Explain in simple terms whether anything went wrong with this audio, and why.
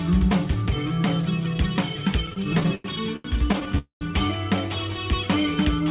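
From 2.26 to 3.78 s the sound keeps catching and dragging. These are repeated stalls (stutter): data arrived late, so the receiver ran dry 14 times and filled each gap, the longest 94 ms.

At 3.78 s the sound hangs as a fading buzz, then drops to silence before resuming at 4.03 s. This call audio freeze, about a quarter-second long, was likely caused by data held up in transit.

From 4.87 to 5.85 s the sound plays slightly slow, at 95% speed, and drawn out. This jitter buffer slow-down stretched the sound to rebuild its reserve.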